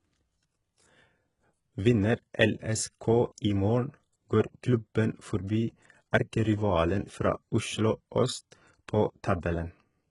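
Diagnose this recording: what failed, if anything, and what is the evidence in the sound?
Codec stage, likely HE-AAC compression: throughout, sibilants sound gritty and metallic, with synthetic treble cut off above 11.1 kHz, fitting roughly 12 kbps band replication rather than a plain low-pass.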